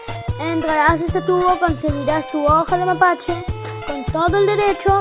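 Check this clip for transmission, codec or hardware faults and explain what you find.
One transmission fault appears. At 3.80 to 3.84 s there is a brief smear or wobble where about 20 ms of audio goes missing. This is short concealed packet loss: the receiver extended the preceding sound to cover the gap, then blended back into the real signal. The call path itself cuts off everything above 4 kHz, which fits a G.711 narrowband codec.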